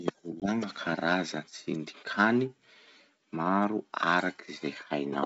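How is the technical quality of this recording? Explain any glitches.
The recording has one glitch, early on. The wideband telephone coding sounds like G.722 in its full-rate mode, with clear speech up to about 7 kHz.

Packet loss on the ADPCM call, 0.40 to 0.47 s: about 20 ms of audio, roughly one packet, drops out as a hard-edged silent gap. Because ADPCM sends only differences from a running prediction, the receiver's predictor and step size no longer match the sender's after the hole. When speech resumes it comes back slightly distorted, which clears over the next few tens of milliseconds as the decoder re-converges.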